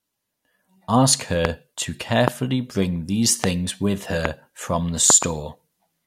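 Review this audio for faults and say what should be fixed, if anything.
Loud pops occur at 1.45–1.47 s, 2.28–2.30 s, 3.44–3.46 s and 4.25–4.27 s, with a double pop at 5.10–5.25 s. Each peaks roughly 20 dB above the speech, which continues underneath. These are likely voltage spikes from a connector, switch or static discharge. Secure and ground all connections, and remove these pops with a de-click tool.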